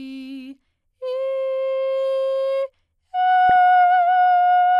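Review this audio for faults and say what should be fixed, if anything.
The music has DAB burbling, a short patch from about 0.46 to 0.53 s and a quick one at 3.49 s. Bit errors at a small fraction of a percent are slipping past error correction, so a handful of MP2 frames carry wrong samples that put short blips of noise in single sub-bands. Improving reception with a better antenna or stronger signal would keep those errors within what the correction can fix.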